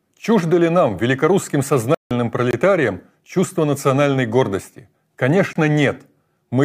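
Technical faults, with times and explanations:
1.94 to 2.11 s, playback stall: the speech cuts out in mid-flow for about 164 ms, leaving a flat silence, and then carries on. That pattern suggests the output was starved for a moment, most likely because the player's buffer ran dry or its audio thread was blocked and could not deliver samples until it recovered. The silence is far longer than a join artefact.
2.51 and 5.53 s, gap between chunks: two short holes of about 23 ms each, spaced 3.0 s apart. The regular spacing points to audio delivered in 3-second chunks, with silence inserted at each join, most plausibly codec padding or a player starting each chunk late. No speech is missing, but the flow breaks abruptly at each boundary, which is heard as a brief clean dropout rather than a click or skip.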